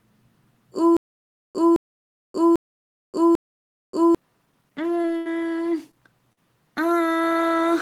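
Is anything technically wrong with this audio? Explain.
Yes, there are three kinds of fault.

From 0.97 to 4.15 s there is a stutter with silent gaps. The same 0.21 s burst plays four times, once every 0.80 s, with 0.58 s of dead digital silence between repeats. This is likely a stalled player retrying its last fragment. Exact repeats and true silence separate it from packet-loss concealment, and the audio meant for that stretch never plays.

Short concealed packet loss occurs at 5.01–5.05 s, 5.91–5.95 s and 6.33–6.39 s. About 20 ms, 20 ms and 40 ms of audio failed to arrive. The receiver filled each hole by extending the preceding sound and blending back, which leaves a brief smear or wobble rather than silence.

A burst of packet loss runs from 5.17 to 5.27 s. About 80 ms went missing in one stretch, and the receiver continued the last sound while fading it for 78 ms. It differs from the short losses in length and in its audible decay before the audio resumes further on, with the gap's content lost.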